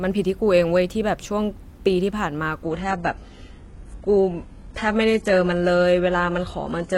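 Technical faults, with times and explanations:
2.63 s to the end, adaptive stream at a lower bitrate: the audio switches abruptly and without a gap to a leaner rendition, with nothing above 11.5 kHz and synthetic-sounding treble, consistent with a low-bitrate HE-AAC stream of around 12 kbit/s after a slowed connection.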